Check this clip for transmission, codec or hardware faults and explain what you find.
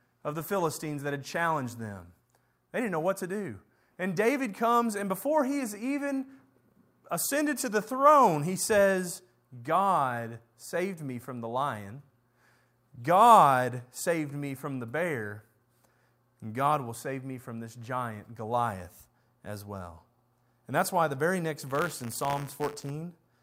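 One hardware fault is present, at the end of the speech. From 21.66 to 22.91 s, just after "why the very next", there is buffer tearing: the write and read positions cross inside each period, splicing a small slice of audio from roughly 30 ms earlier into every buffer. The hard joins produce a steady robotic buzz at 100 Hz, which fits a 10 ms period.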